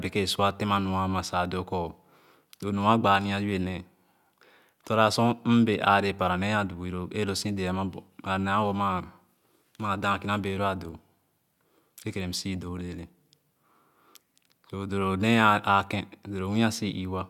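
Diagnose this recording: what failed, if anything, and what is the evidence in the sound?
Nothing in this speech recording points to a failure at any stage between capture and playback. There is no event in the sound to serve as evidence of a fault, so there is nothing to trace to a mechanism.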